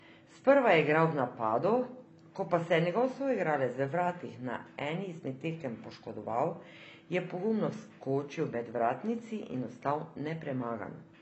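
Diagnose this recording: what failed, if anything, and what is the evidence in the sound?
Codec stage: nothing above 8.1 kHz from start to finish, likely low-bitrate audio saved at a high bitrate. The MP3 can't restore what the first encode stripped.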